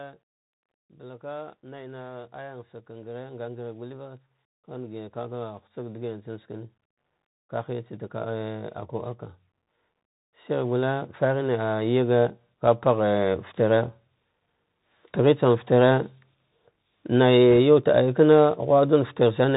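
Bluetooth CVSD headset codec damage runs through the whole of this speech recording and is plainly audible. A one-bit up-or-down coder, consistent with a 64 kbps headset link, stops everything above 4 kHz, so s sounds turn scratchy, loud high sounds distort as the adaptive step fails to keep up, and a granular hiss sits beneath the speech. Automatic gain rising occurs twice. From 1.0 to 6.77 s the gain control judges the input too quiet and lifts its level by about 13 dB, so voice and background swell together. From 10.2 to 13.92 s it climbs again by about 7 dB, more gently. Bit errors on a Bluetooth voice link appear from 17.53 to 17.56 s as a brief rushing crackle rather than a sharp click. Flipped bits at an error rate of around one percent each carry equal small weight and fade quickly, so the disturbance stays short and rough.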